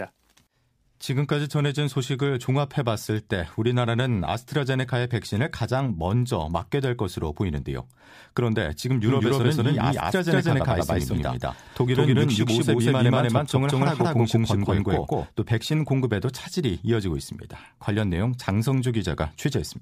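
From 9.07 s to 15.27 s the speech is overlaid by a second, equally loud copy of itself trailing roughly a fifth of a second behind, so every syllable is shadowed by a flat, dry repeat with no reverberant tail, and the copy cuts in and out abruptly at those boundaries. This doubled audio track is likely caused by the same signal reaching the mix twice, once through a slower capture path that lags the direct one.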